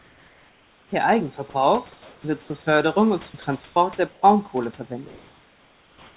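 From the start to 0.92 s the background is a smooth, even hiss without the texture of real room noise, about 37 dB below the loudest sound and roughly 3 dB quieter than the room tone, which is about 31 dB under the speech. This is comfort noise in place of the background. The likely cause is the sender going silent in the pause and the receiver synthesising shaped noise to fill it.

At 1.50 to 1.54 s the sound gives way for a moment to that same flat hiss, and about 20 ms of real sound is lost. This is sound dropped by the voice detector. Likely the detector mistook a quiet stretch for background and stopped sending until it triggered again.

The featureless fill returns at 1.92 to 2.24 s and 2.42 to 2.50 s, each about 3 to 4 dB below the room tone. The sound drops out again at 3.30 to 3.34 s and 3.42 to 3.44 s, losing about 20 ms each time. More comfort noise follows at 3.64 to 3.76 s and 4.12 to 4.22 s, there at close to the room-tone level.

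Nothing is heard above 4 kHz, which fits a narrowband call codec.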